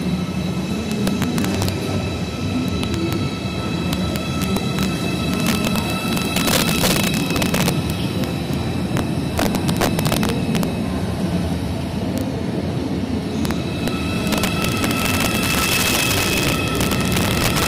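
Throughout the clip, integer overflow breaks the loudest moments: the signal was driven about 6 dB past full scale, and instead of being limited, samples beyond the largest integer wrapped to the opposite sign. Around one percent of samples are affected, each producing a violent crack far harsher than clipping. On a waveform, peaks jump abruptly from the top rail to the bottom; a spectrogram shows thin broadband vertical streaks at every loud peak.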